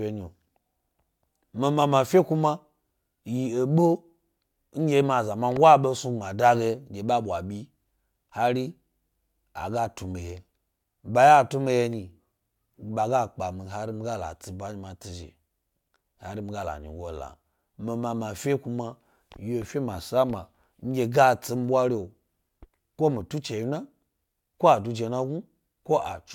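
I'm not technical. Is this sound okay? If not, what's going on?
Yes, this sound is okay, and nothing is going on that needs fixing.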